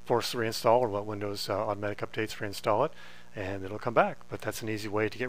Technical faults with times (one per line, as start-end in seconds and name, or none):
0.00-5.28 mains buzz